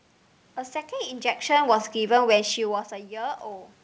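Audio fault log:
1.47–2.82 s, automatic gain falling: the gain control found the input too loud, or its background noise too strong, and eased its gain down by about 5 dB, so speech and room noise sink together.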